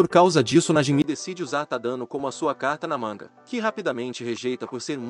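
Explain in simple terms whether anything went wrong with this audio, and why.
Something does go wrong, at 1.02 s. After a tiny gap of about 20 ms, the sound turns duller and noticeably quieter, and a faint new background hiss comes in, all the way to the end. Nothing above roughly 8.3 kHz gets through from then on. That pattern likely means the input switched to a poorer device mid-recording, a different microphone or a headset's call mode with a narrower range and its own noise.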